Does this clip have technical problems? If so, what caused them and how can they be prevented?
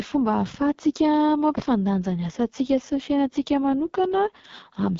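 Yes: throughout, AMR wideband (HD Voice) codec damage makes the speech rough and raspy, fitting the lowest 6.6 kbit/s mode. The spectrogram shows nothing above 7.5 kHz and a noisy, smeared top band. Using 12.65 kbit/s or higher prevents this.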